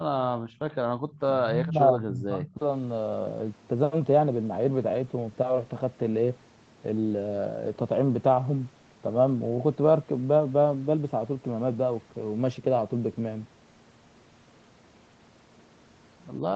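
From 0.37 to 0.61 s the room background dips, falling by about 17 dB at its lowest. This is background gated by the echo canceller. The far side was playing through the loudspeaker, so the canceller pulled the microphone down hard. The ambience thins out for a moment, then returns. The same thing happens from 0.96 to 1.06 s, more briefly. That dip is shallower, about 11 dB.

Between those two dips, from 0.72 to 0.77 s, a faint trailing copy of the voice appears. It arrives 98 ms behind and sits far below the main speech. It returns from 1.12 to 1.19 s with the same delay. This is an echo leak. It likely comes from a loudspeaker whose sound the echo canceller did not fully remove, so part of it was sent back down the line.

From 1.34 to 2.59 s the talker's voice sinks sharply and breaks up. It drops steeply in pieces, for about a second in total. This is speech suppressed in double talk. 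Both sides were likely speaking at once. The canceller could not tell its own talker from the returning echo, so it turned everything down. The voice sounds choked and patchy there, on audio that carries nothing above 8 kHz.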